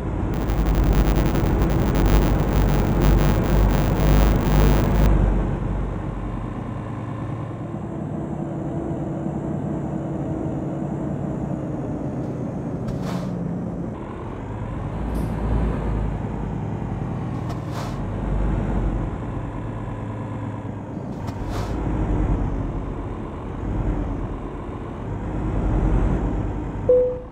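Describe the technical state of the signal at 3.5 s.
A 100 Hz buzz that follows the level of the sound runs from 0.34 to 5.08 s: a filter restarted on every block, starting each 10 ms block from silence.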